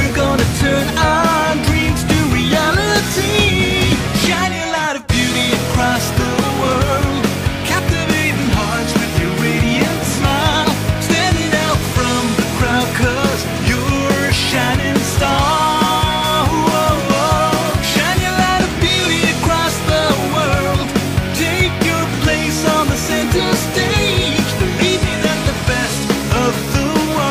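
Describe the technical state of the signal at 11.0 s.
At 11.0 s the signal is intact, with no audible fault at that point.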